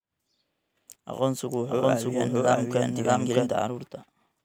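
From 1.51 s to 3.49 s the speech carries a doubled audio track: a second, equally loud copy trails about 0.7 s behind, likely from a slower capture path. It cuts in and out abruptly, and the waveform and spectrogram show each syllable repeated at that fixed offset.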